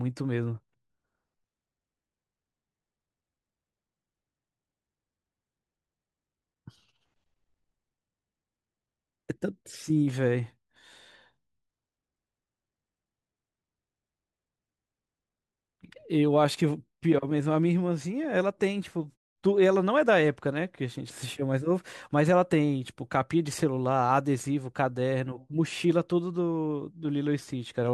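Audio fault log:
No faults detected.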